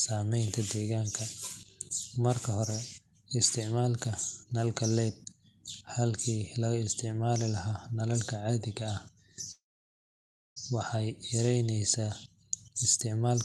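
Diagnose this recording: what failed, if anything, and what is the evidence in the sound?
Call audio freeze, 9.51 to 10.58 s: the last sound fades briefly into 0.96 s of silence, then the speech resumes exactly where it stopped. Likely network packets stalled and the jitter buffer ran dry. Unlike a dropout, nothing is missing; everything after arrives 1.05 s late.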